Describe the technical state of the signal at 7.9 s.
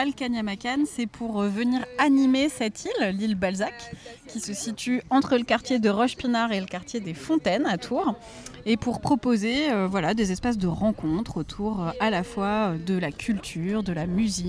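At 7.9 s the signal is intact, with no audible dropout, distortion, glitch or other fault at that moment.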